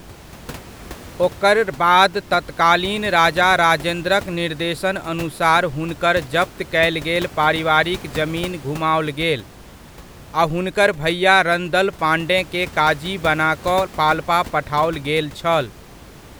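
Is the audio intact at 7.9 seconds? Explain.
Yes, the audio is intact at 7.9 seconds, with only the room's own background noise sitting about 19 dB below the speech.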